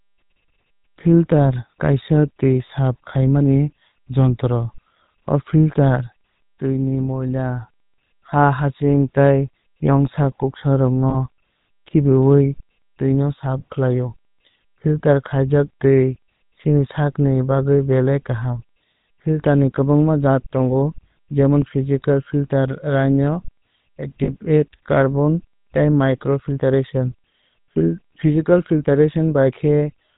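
Throughout, the speech has a buzzy, gravelly roughness and nothing above 4 kHz, the plainly audible signature of the GSM full-rate codec, which fits a 13 kbps stream. It models the vocal tract and excites it with sparse, regularly spaced pulses, discarding much of the fine detail.

At 11.10 to 11.15 s and again at 24.24 to 24.36 s, the sound briefly freezes into a rough, metallic ring. These are lost GSM frames. The decoder replays the last good frame's settings, and the lengths fit one and two missing 20 ms frames respectively.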